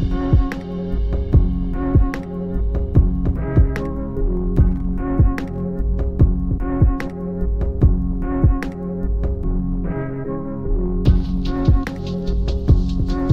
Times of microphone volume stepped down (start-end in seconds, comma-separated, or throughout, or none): none